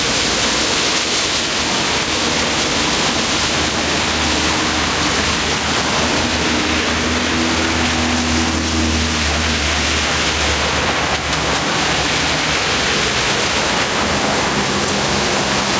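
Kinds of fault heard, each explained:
Gain pumping: gain likely set far too high, so a fast limiter clamps every loud sound, swinging the gain by roughly 5 dB.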